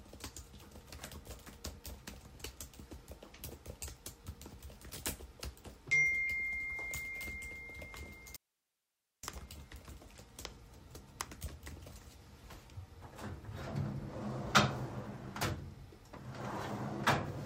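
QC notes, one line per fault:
8.36–9.23 s, audio dropout to a faint residue: the sound cuts out abruptly for about 0.87 s, leaving only low hiss roughly 45 dB below the programme level, then returns just as suddenly. This most likely points to the wanted signal being lost upstream while the path after the break stayed live. On the waveform it shows as a sharp-edged block of near-flat trace; on the spectrogram, a vertical band emptied of content except a faint, even noise floor.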